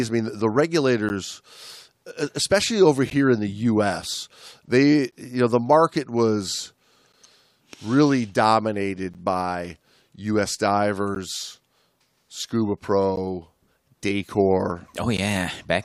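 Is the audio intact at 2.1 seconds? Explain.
Yes, at 2.1 seconds the speech plays through intact, with no audible dropout, click, distortion or other fault at that moment.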